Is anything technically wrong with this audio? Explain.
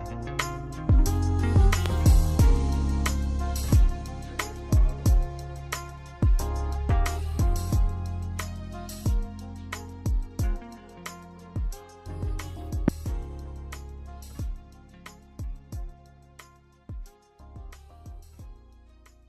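Yes, there are two loud pops. The first, from 1.86 to 1.88 s, is a single sharp crack about 15 dB above the surrounding sound. The second, from 12.88 to 12.91 s, is a harder single hit about 20 dB above it. In both, the audio continues underneath. Each is most likely a sudden voltage step or spike, from a plug, switch, static discharge or driver glitch, added to the signal and shaped by the circuits after it.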